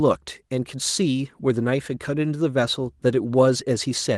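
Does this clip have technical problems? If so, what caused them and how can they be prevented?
No, this clip has no technical problems, so there is nothing to prevent.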